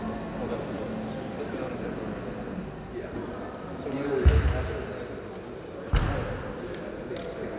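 There are no technical faults to describe at any point in this sound.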